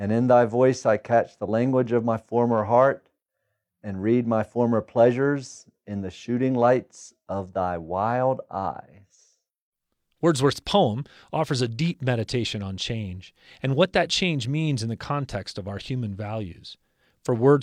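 No technical faults can be heard anywhere in the speech.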